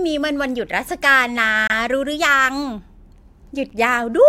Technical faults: gap between stream segments

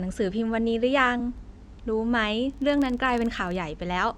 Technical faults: filter restarted on every block; damaged data in a compressed stream

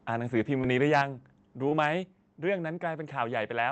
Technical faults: short concealed packet loss; microphone overload; microphone volume stepped down

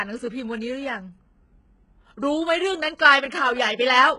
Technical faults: HE-AAC compression

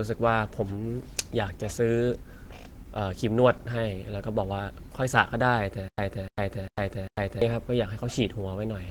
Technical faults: Opus compression; stutter with silent gaps

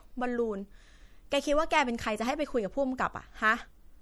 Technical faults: MP3 compression

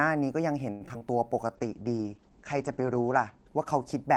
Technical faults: short stall from a late packet; short concealed packet loss; skip ahead; jitter buffer slow-down; call bitrate drop

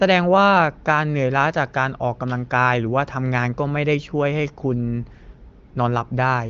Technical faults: none

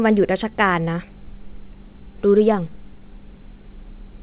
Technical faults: clock drift between sender and receiver; repeated timing corrections

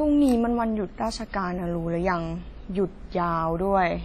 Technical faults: WMA compression

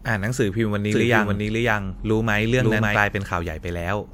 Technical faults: doubled audio track

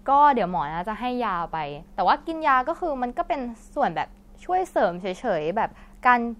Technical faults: none

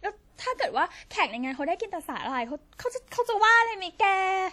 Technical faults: WMA compression

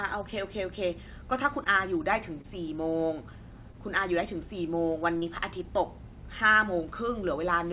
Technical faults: short concealed packet loss

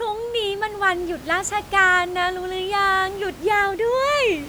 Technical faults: none

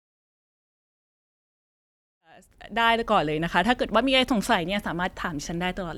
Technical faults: none

